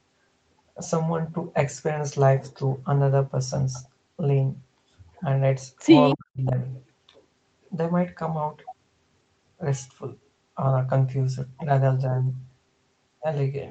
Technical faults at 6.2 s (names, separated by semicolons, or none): speech suppressed in double talk